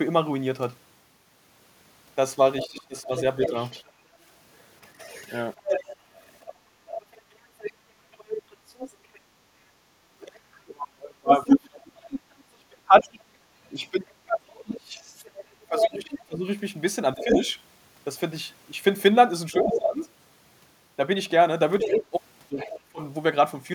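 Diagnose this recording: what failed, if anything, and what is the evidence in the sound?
The failure is in call processing. A second voice runs under the speech from 2.61 s to 22.8 s, only slightly quieter than the talker. This is the other side's voice leaking through. The likely cause is loudspeaker sound that the echo canceller failed to remove from the microphone.

The speech also dips in pieces while that second voice is present. From 2.65 s to 3.55 s it drops by roughly 15 dB, over about a third of a second. From 10.15 s to 23.01 s it drops by up to roughly 30 dB, for about five seconds in total. This points to speech suppressed in double talk, where the canceller turned down both voices together.

Between 6.55 s and 9.87 s the room sound itself sinks by about 8 dB, for about a second in total. It then comes back. This is background gated by the echo canceller, which clamped the microphone while the loudspeaker played.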